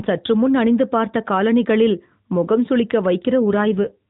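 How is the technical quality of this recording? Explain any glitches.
The recording has gone through a narrowband mobile codec and has one glitch near the end. It has the telephone-band sound of AMR narrowband coding, with nothing above 4 kHz, and light codec damage that fits the 12.2 kbps mode.

From 3.42 to 4.05 s, just after "காலணிகளில் முகம் சுளிக்க", there is an AMR rate drop. The audio turns rougher and more synthetic, with a buzzy edge. The band does not change and there is no gap. This fits the codec being switched down to about 5.9 kbps. Fewer bits go to describing the sound, so its texture degrades until the rate recovers.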